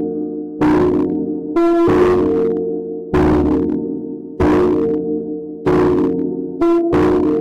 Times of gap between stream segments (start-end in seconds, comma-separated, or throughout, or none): none